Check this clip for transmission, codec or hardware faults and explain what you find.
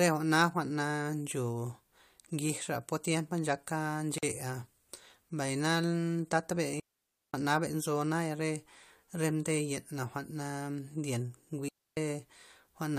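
Three faults are audible in this speech: one gap at a join of encoded pieces and two digital wireless dropouts.

At 4.18 to 4.23 s, just after "tiempa nchaka", a 46 ms silence cuts into the speech with softened edges before it carries on. Separately encoded segments were joined with their encoder delay and padding left in.

From 6.80 to 7.34 s, between "mbay na tata" and "nzo naya re", and from 11.68 to 11.97 s, clean near-silent holes of 541 ms and 286 ms appear, with no noise around them. Each time, the wireless receiver lost too much data and muted with a very short fade.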